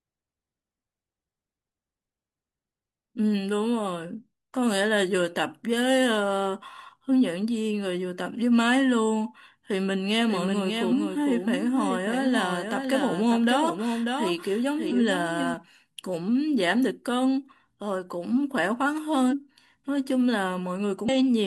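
A speech recording where, likely from a second, slower capture path, the audio is mixed in twice from 10.28 to 15.54 s: a doubled audio track, with a dry copy about 5 dB quieter trailing roughly 0.7 s behind and starting and stopping abruptly. Compressed frames were skipped, consistent with 46.4 ms frames, at 10.87–10.91, 14.86–14.92, 19.28–19.34 and 21.04–21.09 s. Each skip jumps the speech ahead by roughly 100 to 200 ms.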